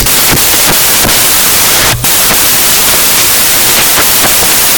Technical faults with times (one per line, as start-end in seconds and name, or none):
0.00-4.78 samples built from the wrong bytes